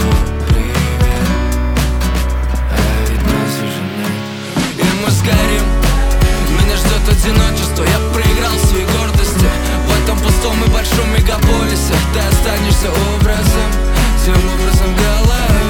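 No technical faults can be heard anywhere in the audio. There is nothing in the signal that needs a timestamp or a repair.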